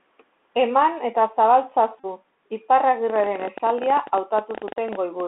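Throughout the speech, the Bluetooth CVSD headset codec is plainly audible. The line passes only about 250 Hz to 3.5 kHz, so the sound is thin and boxy. The 1-bit delta coder, which fits a 64 kbit/s CVSD link, cannot keep pace with fast, loud rises. That gives gritty, scratchy sibilants and a granular hiss beneath everything. On a spectrogram, energy stops at a flat ceiling near 3.5 kHz, with speckled noise filling the band below it and very little under 250 Hz.

From 2.00 to 2.06 s, just after "eta zabal", a Bluetooth headset packet is repeated. Packets went missing, and the decoder replayed the last good one instead of new audio. About 37.5 ms of audio was lost, which suggests a run of roughly ten 3.75 ms packets. The repetition is heard as a short, steady buzz near 267 Hz. In the waveform, a single small segment recurs identically. The spectrogram shows evenly spaced harmonic lines at multiples of 267 Hz.

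From 3.10 to 5.21 s, a train of clicks runs over the sound and continues through the pauses. There are around forty clicks at about 16 per second, spaced irregularly, and they peak at about 5 dB above the signal. Interference from nearby equipment, or a faulty connection or power supply, is the likely source. In the waveform they appear as thin, similar spikes. On a spectrogram they are scattered vertical streaks crossing the whole band.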